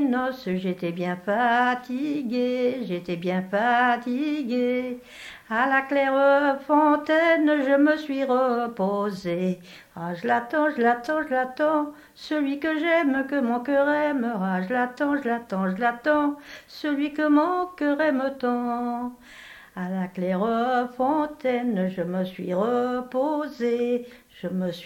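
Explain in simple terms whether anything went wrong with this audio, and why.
Nothing went wrong with this audio; there are no technical faults to be heard anywhere in it.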